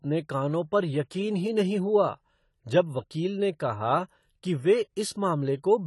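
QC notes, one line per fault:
Throughout: AAC compression, likely from a low-bitrate AAC-LC encode. Nothing comes through above 11.5 kHz, so the speech sounds dull and closed-in, and the codec damage is plainly audible, with a smeared, warbly texture on sustained sounds and a fizzy edge on sibilants. That fits the encoder running short of bits, something around 32 kbps, so it cuts the top off and quantises what's left coarsely, leaving gaps and noisy patches in the spectrum.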